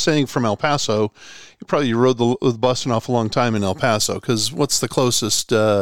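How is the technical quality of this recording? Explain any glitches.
The recording has one fault, a channel delay (comb filtering), from 0.00 to 3.56 s: one channel lags by a couple of samples and the mono sum cancels the top, leaving the speech dull. A spectrogram shows a steady dark notch around 10 kHz.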